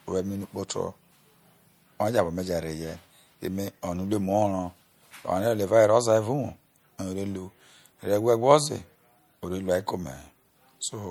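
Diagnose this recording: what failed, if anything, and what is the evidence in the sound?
The codec stage is the likely culprit: this speech was probably encoded at a low bitrate and then saved again at a high one, a case of low-bitrate audio saved at a high bitrate. The fault runs through the whole clip. The file's size suggests a generous bitrate, yet the sound carries MP3 artefacts that fit roughly a 64 kbit/s first pass, which the second encode preserved rather than repaired. A spectrogram shows nothing above 20.1 kHz.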